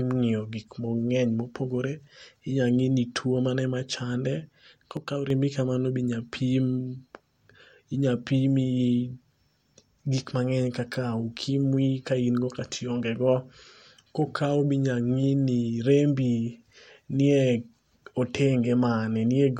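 From 4.97 to 5.30 s the speech abruptly drops by about 6 dB for a third of a second, then snaps back. The likely cause is one channel dropping out before the mono sum. The waveform shows a clean rectangular step, and the spectrogram a uniform band-wide dimming.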